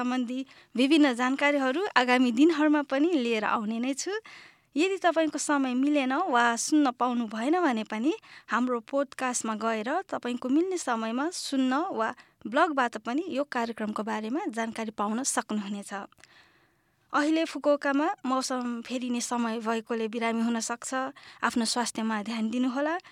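Speech recording with no audible technical fault anywhere in the clip.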